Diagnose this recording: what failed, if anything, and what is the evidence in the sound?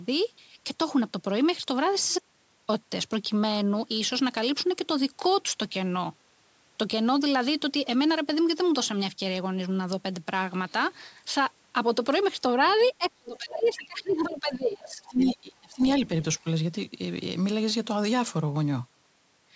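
The input path most likely lost its signal for about half a second, through a disconnected device, failed link or stray mute, while the recorder kept writing silence. The result is an audio dropout to silence from 2.19 to 2.69 s. The speech cuts off mid-flow and returns abruptly, and the gap in between is silence with no room tone at all. Whatever was said during that half second is simply gone.

The call processing stage is the likely source of the other side's voice leaking through. The far end played on the talker's loudspeaker, and the echo canceller failed to remove all of it from the microphone. Scraps of a second voice appear at 12.68–12.92, 13.53–13.69, 14.09–14.30, 15.05–15.32 and 15.81–15.86 s. They sit about 25, 20, 25, 15 and 25 dB below the speech, so the 15.05 s fragment is the most audible one.

Speech is suppressed in double talk, and the cause again points to the echo canceller. 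With both sides talking at once, it could not separate the local talker from the loudspeaker echo, so it turned everything down. From 12.98 to 15.82 s, spanning roughly three seconds of overlap, the talker's voice dips, at worst falling by around 25 dB. Within the call's microphone processing, the band tops out at 8 kHz.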